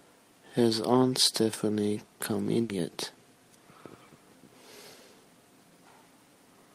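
At 2.63 to 2.71 s, a burst of packet loss left a run of speech audio undelivered. The receiver filled about 60 ms by stretching the last sound and fading it down, then resumed with about 60 ms of speech skipped, producing a brief smeared stall and jump.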